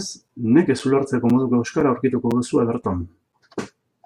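At 0.28, 0.79, 1.30, 1.80, 2.31, 2.82 and 3.32 s, gaps between chunks: each half-second chunk is separated from the next by a 6.5 ms silence, heard as short regular holes, visible as thin blank vertical stripes.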